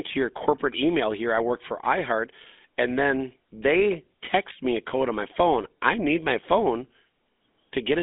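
A GSM full-rate codec colours this speech clip from start to finish, giving it a buzzy, gravelly roughness that is plainly audible throughout. The coder models the vocal tract as a filter and excites it with a sparse, regularly spaced pulse train, so fine detail in the excitation is lost and voiced sounds take on a grainy edge. The band is narrow, roughly 250 Hz to 3.5 kHz, with nothing above about 3.7 kHz, which fits a 13 kbps full-rate stream.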